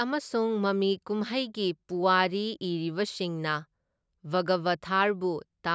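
No technical faults are audible anywhere in the speech recording.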